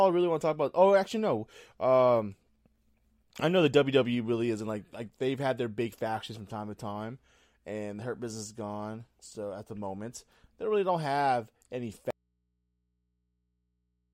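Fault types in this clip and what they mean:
Audio dropout to a faint residue: the speech cuts out abruptly at 12.1 s until the end. Mains hum remains about 50 dB down, likely from an open input.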